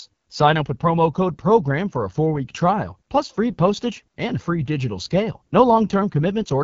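Throughout, the speech sounds rough and raspy, with a buzzy, synthetic edge and nothing above about 7.4 kHz. That is AMR wideband (HD Voice) coding at a very low rate, which fits 8.85 kbit/s. The codec's simplified vocal-tract model cannot capture the voice cleanly at that rate.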